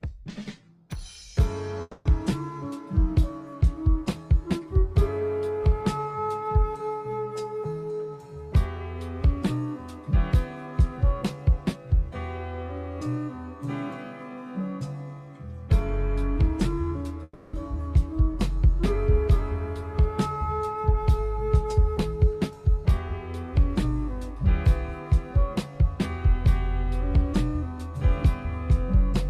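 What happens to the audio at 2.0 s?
At 2.0 s the sound breaks into a fading buzz from 1.81 to 2.08 s, briefly silent, then resumes past about 240 ms lost, likely a long network dropout.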